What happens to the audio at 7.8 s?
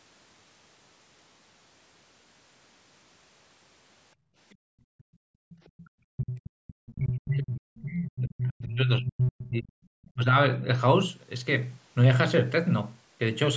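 At 7.8 s you're right in the middle of a stretch of speech suppressed in double talk, running from about 6.14 to 9.75 s. The talker's level sinks hard, with the deepest dips roughly 40 dB down, and the audio keeps fading and breaking up for most of that window. The likely cause is both ends talking at once: the echo canceller couldn't tell its own talker apart from the loudspeaker echo, so it pulled everything down together.

Sitting right on that moment, from 7.77 to 7.82 s, there's also a brief scrap of the other side's voice leaking through. It's a tiny fragment, somewhere around 30 dB below the main speech, so it comes across as a faint blip rather than anything you'd follow. That's likely loudspeaker sound from the far end that the echo canceller didn't fully scrub out of the mic signal before the audio went on.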